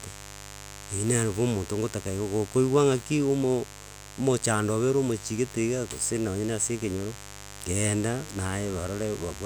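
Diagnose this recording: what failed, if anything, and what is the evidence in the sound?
Mains buzz got into the analogue wiring, and it sits under the speech for the whole clip, roughly 15 dB down. It's a raspy 50 Hz buzz, not a smooth hum: something like a dimmer or an unshielded lead is letting switching spikes in twice per cycle, so harmonics stack up into the kilohertz range.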